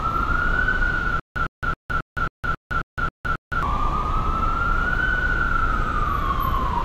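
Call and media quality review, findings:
Stutter with silent gaps, 1.20 to 3.63 s. Likely a playback or stream stall, with each retry replaying the last buffered fragment and then running dry. Audible as a 108 ms burst repeating nine times every 270 ms, each followed by 162 ms of digital silence. The original audio for that span is lost.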